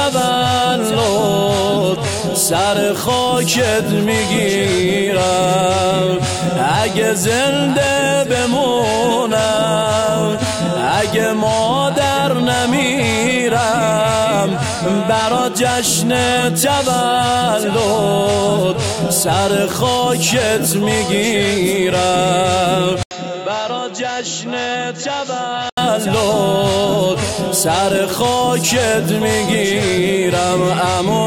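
At 23.03 s the sound drops out for 80 ms, then returns duller and boxier, a few decibels quieter, over a new, faint noise floor well below the signal. This likely reflects the input switched to a poorer device, one passing a narrower band. On a spectrogram, all energy above 7.6 kHz vanishes abruptly at that point, leaving a flat ceiling. The waveform shows a short gap and a lower envelope. Full bandwidth returns at 25.78 s.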